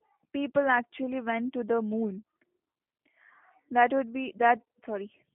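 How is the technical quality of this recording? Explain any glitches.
The technical quality is limited by one fault running through the whole clip. G.729 codec, from start to finish: the speech is rebuilt from a vocal tract filter, pitch prediction and sparse pulses at a rate that fits 8 kbit/s, within a phone band of 150 Hz to 3.5 kHz and nothing above 3.6 kHz. It sounds muffled, plainly rough and synthetic.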